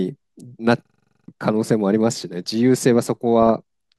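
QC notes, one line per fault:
0.85–1.28 s, system hang loop: a single 43 ms slice of audio repeats exactly, about ten times, giving a stutter at roughly 23 Hz. The slice length fits a 2048-sample buffer that kept replaying while the system stalled, so around 0.4 s of real audio never arrives. Unlike a dropout or codec glitch, each repeat is an identical copy of the last, so the rhythm is perfectly regular and nothing new is heard until the loop releases.
3.42–3.51 s, DAB burbling: for under a tenth of a second the sound breaks into short blips of noise in individual frequency bands. This points to a short burst of corrupted MP2 frames, with bit errors around 0.15 percent slipping past the error correction into sample and scale-factor data. Unlike a hang loop, nothing repeats. The damage is spectral, with parts of the band disturbed independently while the underlying audio keeps moving forward.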